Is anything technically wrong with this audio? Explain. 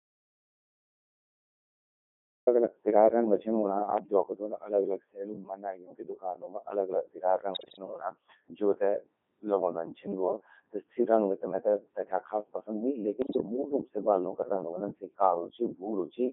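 Yes. Three problems can be heard.

The whole clip runs through a Codec 2 vocoder, which fits its 3.2 kbit/s mode. The encoder keeps only pitch, voicing, energy and a coarse spectral envelope, and the decoder rebuilds the speech from sine waves, so the original waveform is discarded. The damage is heavy: the speech comes out buzzy and robotic, squeezed into a radio-style band from 150 Hz to 3.5 kHz, with no natural texture left.

From the very start until 2.47 s there is an audio dropout to silence, already in progress when the clip begins. The input was likely lost, through a disconnected device, a broken link or an accidental mute, while the recording kept writing silence. The gap is silent with no room tone, and the speech cuts in abruptly at 2.47 s.

Bit errors on digital voice radio strike twice, from 7.54 to 7.78 s and from 13.22 to 13.46 s. Flipped bits reached the vocoder's parameters, and at such a low rate each bit steers the pitch, level or spectrum of an entire frame. 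The first burst is heavier, with errors on the order of 7 percent against a few percent in the second. Both turn the voice into sudden pitch jumps, warbles and garbled robotic bleeps.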